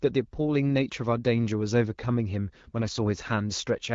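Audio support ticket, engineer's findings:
Speech over AMR-WB HD Voice, sound consistent with the 12.65 kbit/s mode and only light coding character audible; no faults found.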